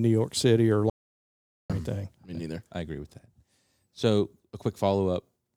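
At 0.90 s the input feeding the recording was most likely lost, perhaps through a disconnected device, a failed link or an accidental mute, while the recorder kept writing silence. The result is an audio dropout to silence: the speech cuts off mid-flow and the gap is dead silence with no room tone beneath it. About 0.8 s of speech is simply missing before the sound returns at 1.70 s on "or anything".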